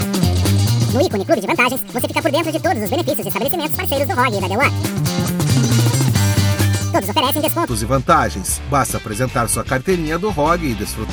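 From the very start up to 7.68 s there's a section at the wrong speed: everything runs 1.8 times too fast, so pitch and tempo jump together and the sound comes across hurried and chipmunk-bright, roughly ten semitones high. That pairing points to playback or editing against the wrong clock, most likely a sample-rate mismatch, rather than any deliberate pitch effect. At 7.68 s it snaps back down to its proper speed.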